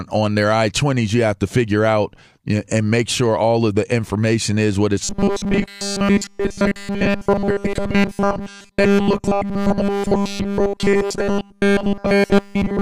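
From 5.04 s to the end, robotic sound from repeated short buffers: a 200 Hz metallic buzz, likely from a 5 ms buffer looped throughout, unlike random dropout clicks.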